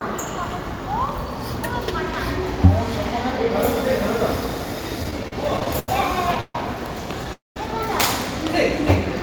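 From 5.03 to 5.89 s the sound drags and catches in short repeated hitches: nine small holes, the longest 87 ms, together about 204 ms or roughly a quarter of that stretch. This is repeated stalls (stutter). Packets arrived late or too slowly, so the jitter buffer kept running dry and the last sound was stretched to bridge each wait. Nothing is lost.

At 6.41 to 6.55 s the sound hangs for 137 ms, fading to silence for its final 40 ms, then resumes. At 7.33 to 7.57 s a longer hang of 227 ms fades into silence for 170 ms. Each is a call audio freeze, likely from packets held up long enough to empty the jitter buffer, with the tail extended until delivery resumed. This inserts a gap without dropping anything.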